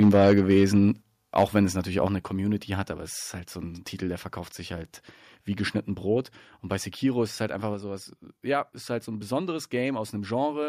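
From 0.0 to 0.79 s the speech shows microphone overload: the loudest syllables crackle with a harsh, gritty edge, most likely because the input was driven about 4 dB past the converter's limit, flattening the tops of a few percent of samples. On a waveform those peaks appear as squared-off plateaus, and a spectrogram shows broadband smearing above the voice harmonics. At 1.02 s the level drops suddenly by 5 dB. This microphone volume stepped down is likely the call software reacting to that clipping by cutting the device's input gain in one move, so voice and background both fall together, visible as an abrupt step in the waveform envelope. A second overload follows from 1.37 to 1.6 s, about 3 dB over and clipping fewer samples, just before "es natürlich auch eine", with the same flat-topped peaks, likely from input gain that is still too high. Right after "es natürlich auch", at 2.07 s, the gain steps down another 5 dB, likely a further automatic correction. 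The last step comes at 7.74 s, between "ist es halt einfach" and "sowas ja ist halt". It is smaller, about 2 dB, and likely has the same cause, showing as a modest but clean drop in the envelope and an evenly dimmer spectrogram.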